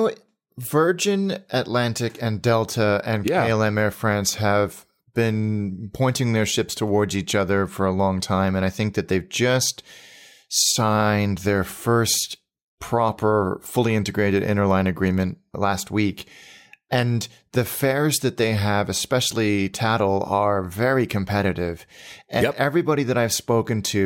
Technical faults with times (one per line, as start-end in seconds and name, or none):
none